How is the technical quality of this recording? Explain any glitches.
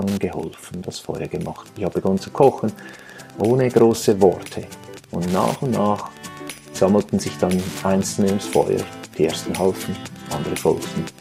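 The recording is compromised by one fault, present for its whole length. Wi-Fi interference: a nearby Wi-Fi radio's beacon, sent every 102.4 ms, is being picked up and rectified by the audio circuit. The result is a steady ticking about ten times a second, sitting roughly 25 dB below the wanted sound, audible throughout.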